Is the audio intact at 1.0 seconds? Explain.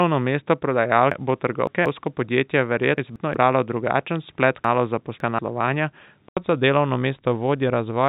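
No. At 1.0 s the sound sits inside a stretch from 0.0 to 6.37 s that is dull and boxy, with nothing above 4.9 kHz, a faint extra noise floor about 50 dB down, and a level roughly 5 dB off. It ends with an 80 ms silence before fuller sound returns. That points to an input switched to a poorer device, likely a change of microphone. A telephone coding limit would cap the band at 4 kHz and last the whole clip, not change abruptly at a dropout.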